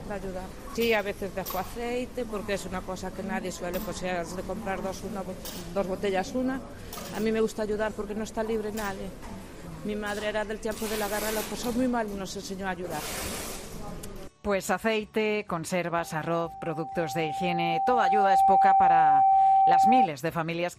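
From 15.94 to 20.08 s there's loudspeaker feedback squeal: the mic hears its own speaker, and a 778 Hz tone swells over a few seconds to roughly 10 dB above the sound.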